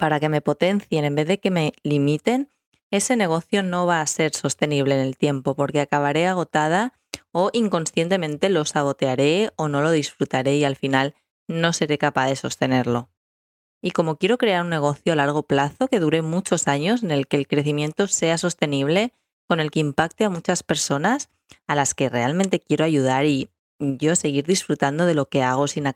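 No technical faults can be heard anywhere in this recording.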